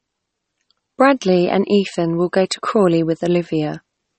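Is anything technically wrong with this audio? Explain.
Yes. Throughout the speech there is plainly audible MP3 compression damage, likely from encoding at a low bitrate, with the character pointing to something around 32 kbps. Nothing is present above 8.4 kHz, because the encoder dropped the treble at a fixed cut-off to save bits. Within the remaining band, weak frequency components are zeroed and reappear from frame to frame, giving a watery, swirling texture, metallic chirping on sibilants, and smeared attacks.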